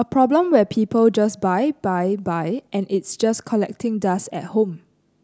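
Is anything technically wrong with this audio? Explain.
No, nothing technically wrong stood out on listening to this speech clip.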